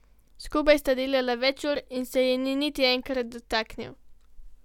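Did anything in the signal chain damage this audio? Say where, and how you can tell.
No, nothing I can hear points to damage anywhere along the chain, so this recording seems to have come through just fine.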